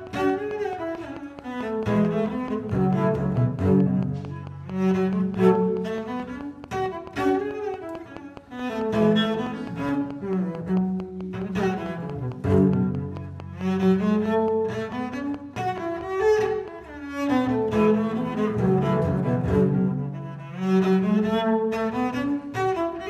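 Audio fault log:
0.07–16.69 s, train of clicks: about seventy near-identical ticks at a steady 4.6 per second, peaking a few dB above the sound and persisting through pauses, likely from nearby interference. Their even spacing and matching shape set them apart from random crackle.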